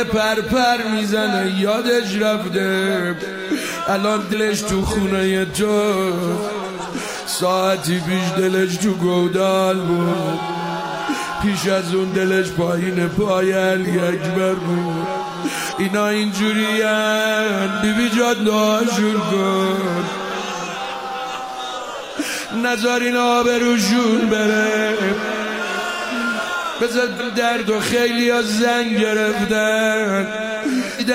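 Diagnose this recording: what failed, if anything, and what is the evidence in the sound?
Compressed frames skipped at the codec stage: the sound jumps ahead at 4.29, 10.09, 15.68, 27.16 and 30.96 s, dropping about two 42.7 ms frames at the first three, roughly ten at 27.16 s and four at 30.96 s.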